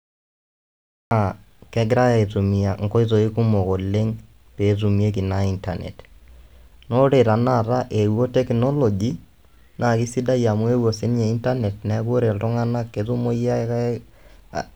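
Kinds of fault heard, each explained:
Cut-off start: the speech begins abruptly at 1.11 s out of digital silence, mid-sound, with no natural attack, because capture started late.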